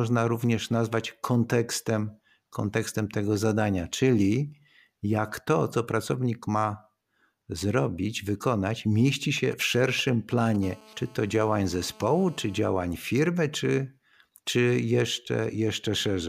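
Right after "zrobić wykonać mieści", from 9.37 to 10.56 s, GSM signalling bursts break in. A 2G handset close to the recording chain is sending short groups of radio bursts, which points to it signalling to the network. The audio circuitry rectifies those pulses. The result is a galloping dit-dit-dit of brief buzzes at 217 Hz. It sits roughly 20 dB under the speech.

From 10.63 to 12.60 s comes a steady GSM phone buzz, ending just before "firmy czy czy". The handset now transmits continuously at 217 bursts per second, which fits an active call. Each burst is rectified into the audio path. This gives a hard, raspy 217 Hz tone full of harmonics that has nothing to do with the speech. It runs about 27 dB below the speech.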